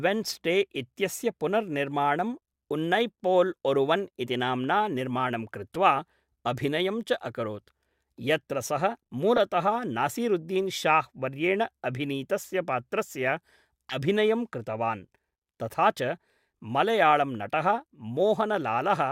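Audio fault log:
1.91, 5.74, 9.36–9.39, 12.43–12.47 and 13.89–13.97 s, corrupt frame decoded: short chirps and noise blips, faint at 1.91 s and loudest near 9.4 s. Bit errors in two or three compressed frames each time were decoded anyway, putting energy at the wrong frequencies.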